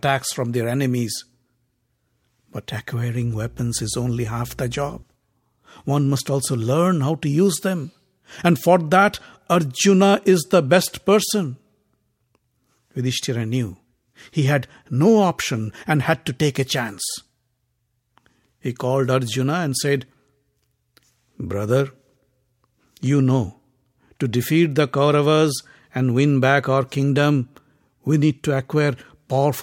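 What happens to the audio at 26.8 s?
At 26.8 s the speech carries on intact, with no dropout, click, distortion or other fault at that moment.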